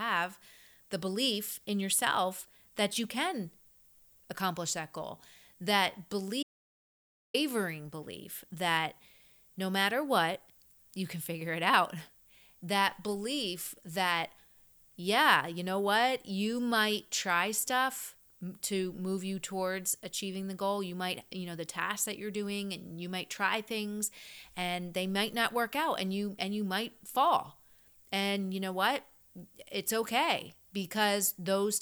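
Speech recording with an audio dropout to silence at 6.43 to 7.34 s: nearly a second of silence, no room tone, likely a brief input loss.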